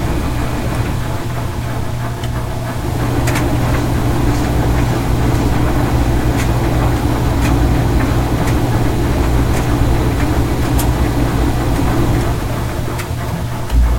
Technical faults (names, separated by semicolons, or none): low bit depth without dither